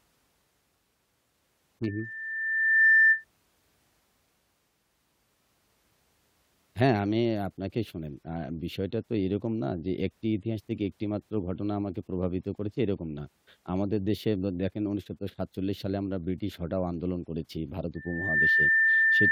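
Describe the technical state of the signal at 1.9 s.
A single tone near 1.8 kHz is swelling over the speech. This is loudspeaker feedback squeal, running from 1.83 to 3.25 s. It builds for about a second to roughly 10 dB above the speech, because the microphone re-captures its own loudspeaker with loop gain above unity at that frequency.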